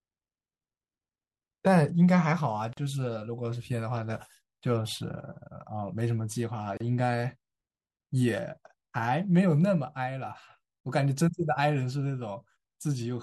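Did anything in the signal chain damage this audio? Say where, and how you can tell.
Yes. At the codec stage, a gap at a join of encoded pieces cuts the speech to silence at 2.73–2.77 s (40 ms) and 6.77–6.80 s (32 ms), 4 s apart, then resumes. Segments encoded separately were joined with encoder delay and end padding left in.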